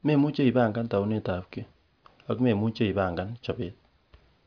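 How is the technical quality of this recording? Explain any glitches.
No glitches can be heard anywhere in this speech recording. There is nothing in it that calls for explanation.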